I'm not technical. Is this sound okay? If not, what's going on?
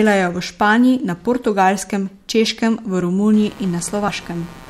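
No. Computer activity noise starts at 3.33 s and runs to the end: the computer's busy electronics leak onto the audio wiring, adding a buzz pulsing about 150 times a second. Compressed frames skipped at 4.08 s: a chunk of the recording was not played, so the speech jumps ahead roughly 70 ms, which fits about two 32 ms frames being lost.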